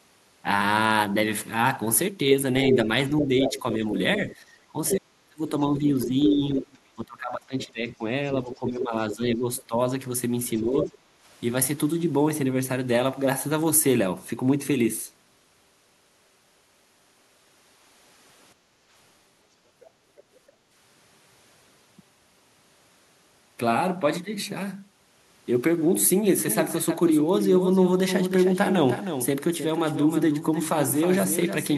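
Speech suppressed in double talk runs from 2.68 to 10.94 s. The talker's level sinks in patches totalling around four seconds, at worst by roughly 25 dB, while a second voice is present. The likely cause is an echo canceller that could not separate the talker from loudspeaker echo and pulled everything down.

The other side's voice leaking through overlaps that stretch at 2.73 to 4.96 s, roughly 5 dB under the talker, then briefly at 6.02 to 6.07 s and again at 7.6 to 10.89 s, roughly 10 dB under. It likely comes from loudspeaker playback the canceller left in the microphone signal.

Background gated by the echo canceller comes at 18.55 to 18.92 s. The room sound drops by about 11 dB for around 400 ms, then returns. The microphone was clamped hard while the loudspeaker played, so the ambience briefly falls away.

At 19.8 to 20.38 s the other side's voice leaks through again, now very faint, roughly 30 dB below the speech. 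A small residue of loudspeaker echo likely slipped past the canceller, leaving only a trace of the far voice.

A doubled audio track starts abruptly at 26.47 s and lasts to the end. A full-band copy trails by roughly 300 ms, around 10 dB quieter, with no room decay. It is likely a second capture path or an edit holding two out-of-step copies.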